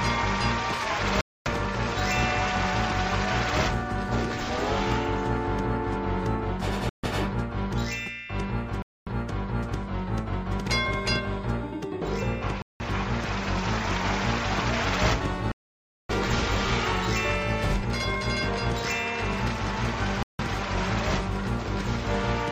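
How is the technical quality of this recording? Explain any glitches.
The recording has six dropouts to silence. At 1.21, 6.89, 8.82, 12.62, 15.52 and 20.23 s, the sound cuts out for 250, 143, 243, 180, 577 and 165 ms, then resumes. These are likely Bluetooth stalls. Interference delayed packets, the receiver's buffer ran empty, and playback paused until the resent data arrived.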